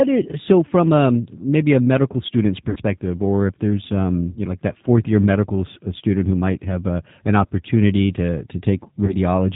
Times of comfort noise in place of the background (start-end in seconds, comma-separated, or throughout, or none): none